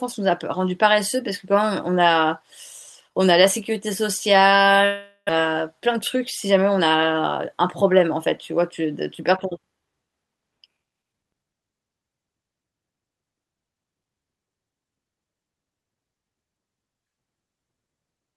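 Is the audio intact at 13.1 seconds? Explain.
Yes, the audio at 13.1 seconds is intact, with no audible fault at that moment.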